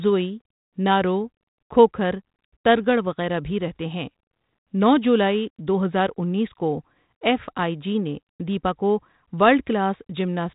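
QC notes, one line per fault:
No faults found in this speech recording.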